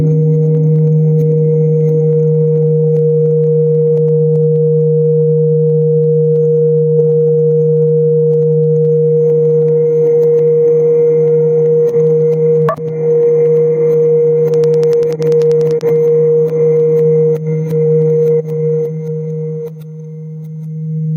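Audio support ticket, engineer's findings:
Gain pumping, whole clip. Loud and soft parts pulled closer in level, sound squashed, swing about 10 dB. Likely input gain far too high with a fast limiter clamping. Unlike a noise gate, the floor rises between sounds rather than cutting out.

Train of clicks, 14.54–15.82 s. Regular ticking, 10.2 per second, around fifteen clicks peaking about 5 dB over the signal. Likely interference or a faulty connection or power supply. Unlike random crackle, the clicks have much the same shape, are evenly paced, and continue through pauses.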